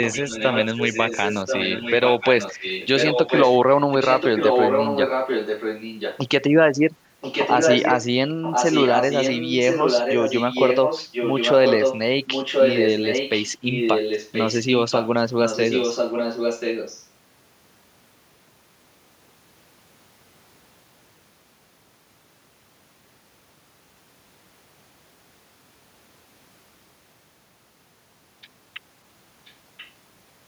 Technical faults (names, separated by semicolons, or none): echo leak